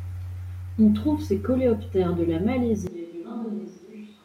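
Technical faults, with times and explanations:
2.87 s to the end, switch to a distant microphone: the speech abruptly turns hollow and roomy, loses bass, drops by about 10 dB, and sits over room noise roughly 30 dB below it, likely because the close microphone dropped out and a farther one took over.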